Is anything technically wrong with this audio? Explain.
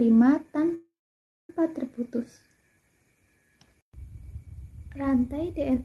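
Yes. A call audio freeze runs from 0.74 to 1.50 s. The last sound trails off in a fading tail, then about 0.57 s of silence, before the audio resumes exactly where it stopped. Delayed packets likely emptied the jitter buffer, inserting a 0.75 s gap with nothing lost. The call codec's band limit near 12 kHz applies throughout.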